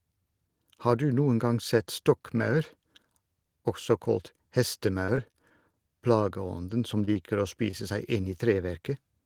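From 5.05 to 5.89 s the speech turns choppy and robotic. This is repeated packet loss. Five holes open in quick succession, the longest about 24 ms. About 60 ms of audio never arrives. The receiver patches each hole by carrying the last sound forward, about 81 ms of invented fill in all. That covers roughly 12 percent of the stretch. The repeated patching gives the sound a choppy, broken texture.

At 7.05 s comes a short concealed packet loss. About 20 ms of audio is missing. The decoder fills the gap by continuing the previous sound for about 22 ms, then blends back into the real signal. It is heard as a brief smear. A second loss follows at 7.13 s, again with about 20 ms missing and 18 ms filled.

At 7.71 s there is a short stall from a late packet. The packet misses its slot and the jitter buffer runs dry. The receiver stretches the last sound for about 21 ms until the packet lands. Nothing is lost. 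Playback resumes from the same point, now running about 21 ms later. One sound is held slightly too long.

At 8.21 s another short concealed packet loss drops about 20 ms. Roughly 21 ms of continued sound covers it. Another brief smear results.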